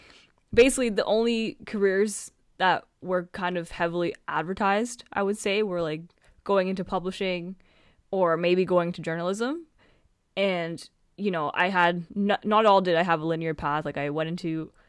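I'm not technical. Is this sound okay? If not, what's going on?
Yes, nothing wrong with this one: no dropouts, glitches, or distortion anywhere in the recording.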